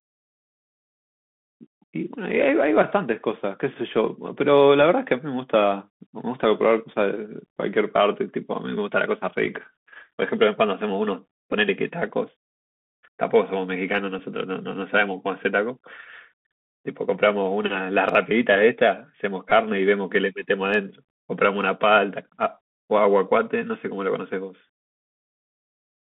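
From start to finish the audio carries the Bluetooth CVSD headset codec: a one-bit delta coder whose adapting step lags fast changes. Nothing above about 3.5 kHz or below 150 Hz gets through, sibilants turn scratchy, and a granular hiss sits underneath. That grain and hiss set it apart from a plain telephone band-limit.

At 11.52 s comes a Bluetooth headset packet repeated: about 7.5 ms of lost audio is filled by decoding the previous packet's bits again, which points to two lost packets. A second, longer one follows from 19.50 to 19.52 s, with about 15 ms repeated, which fits four lost packets. Each repeat recurs every 3.75 ms, giving a brief buzz near 267 Hz rather than the silent gap or plain click of a dropout.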